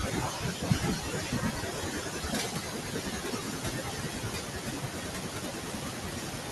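Noise suppressor artifacts run through the whole clip. The suppressor dips steady background bands frame by frame, so the leftover noise pumps between phrases. Speech cut by the noise suppressor also spans the clip, from 0.0 to 6.51 s. The suppressor mistakes quiet speech for noise and pulls it down by as much as about 19 dB. Consonants and word endings sound swallowed and faint, and the room noise climbs by about 21 dB near 2 s.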